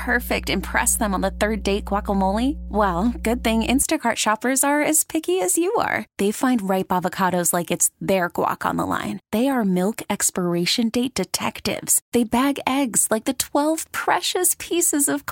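From the start to 3.83 s, a steady low drone sits under the speech, loud enough to compete with it. This is mains hum at 60 Hz, where a ground loop or nearby transformer leaks the power line's frequency into the signal before it stops.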